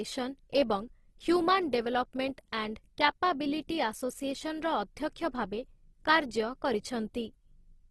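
Throughout the clip, the speech carries plainly audible codec damage: tones turn noisy, rough and grainy, and nothing remains above 12.1 kHz. The likely cause is Opus compression in its CELT mode, filling starved bands with substitute content, which fits a bitrate near 16 kbps.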